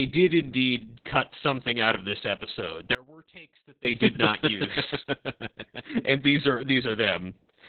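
From the first moment the speech carries Opus voice compression, heavy enough to point to a bitrate around 6 kbps in the SILK linear-prediction mode. Nothing reaches above about 4.3 kHz, so the sound is confined to the narrowband, giving it a muffled, telephone-like dullness. The coarse excitation coding makes voicing hoarse and faintly robotic. Unlike a plain low-pass filter, which would only dull the top, this also roughens the texture of the speech itself.

From 2.95 s to 3.85 s, roughly 0.9 s, the speech cuts out abruptly in an audio dropout to a faint residue, then snaps back just as suddenly. The gap is not silent. A faint trace of the signal remains, roughly 25 dB below its normal level, which suggests the wanted signal was likely lost upstream while the path after the break stayed live. A natural pause or a fade would not start and stop this sharply, and a true mute would leave nothing behind.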